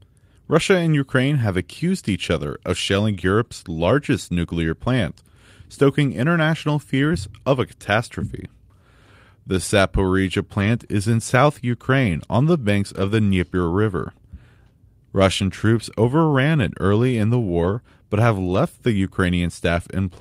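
Speech, with four spots where lost packets were rebuilt from error correction: brief rough, noisy patches at 10.59 s (just before "is in south"), 12.97 s (after "on the banks"), 17.63 s and 18.49 s, each 40 to 80 ms of low-bitrate backup copies.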